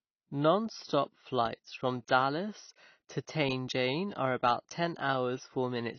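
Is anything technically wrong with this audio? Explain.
Yes. Throughout the speech, AAC compression is plainly audible. Everything above 6.6 kHz is missing, so the sound is dull, and sibilants warble and fizz. This is likely AAC-LC squeezed to a low bitrate, around 24 kbps, where quantisation discards whole bands. A spectrogram would show a flat ceiling at 6.6 kHz with patchy holes below.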